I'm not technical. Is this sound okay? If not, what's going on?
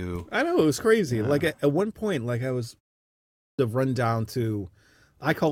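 No. At 3.17 s, right after "point like I was" and a short pause of about half a second, the playback device has dozed off in the quiet and takes roughly 0.42 s to wake up. That's a clipped start after a pause: the opening of the next stretch of speech is swallowed, and the audio jumps in abruptly with "to run down". Unlike simple muted pauses, which only silence the gap, here actual speech is missing.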